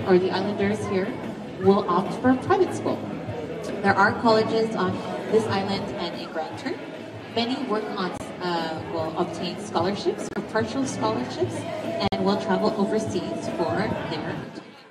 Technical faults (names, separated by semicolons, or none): corrupt frame muted